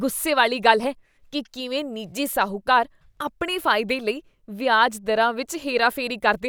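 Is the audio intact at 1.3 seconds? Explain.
Yes, the speech at 1.3 seconds is intact, with no dropout, click, distortion or other fault at that moment.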